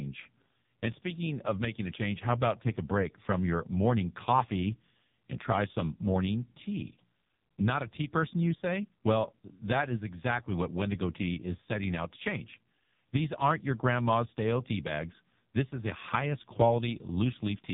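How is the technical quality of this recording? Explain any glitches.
Quality is poor: the speech is heavily degraded by AMR narrowband mobile codec coding across the whole clip. Nothing above 3.8 kHz survives, and the speech sounds buzzy and synthetic. The codec rebuilds speech from a vocal-tract model and a few excitation pulses per subframe, and damage this heavy fits a low mode around 5 kbps.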